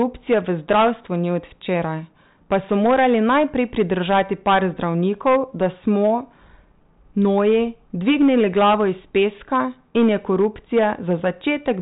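Throughout the speech, the level is driven about 12 dB past what the signal path can pass, so the largest peaks, a few percent of the waveform, are sheared flat. This is hard clipping: each flattened top throws off harmonics well above the fundamental, heard as a gritty crackle riding every loud syllable. Even inside the telephone band, which stops near 3.8 kHz, that rasp remains.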